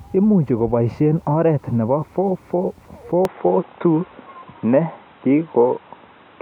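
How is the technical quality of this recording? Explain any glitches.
The recording has one clear fault. From 3.25 s to the end, the speech turns dull and boxy, with nothing above 3.9 kHz, a level shift of about 5 dB and new background noise around 40 dB down. This is likely an input switched to a poorer device, with no gap at the changeover.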